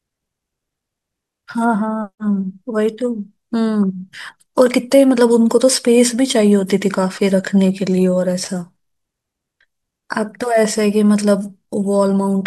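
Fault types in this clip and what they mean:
No fault types can be heard in this clip.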